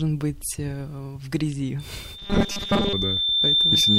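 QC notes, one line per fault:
1.79 to 3.98 s, loudspeaker feedback squeal: a 3.6 kHz tone swells over about a second and a half to about 5 dB above the speech, as mic and speaker form a runaway loop.
2.18 to 2.93 s, robotic sound from repeated short buffers: speech turns into a rigid metallic 200 Hz buzz, likely from late audio patched by looping short 5 ms chunks, most of it repeated.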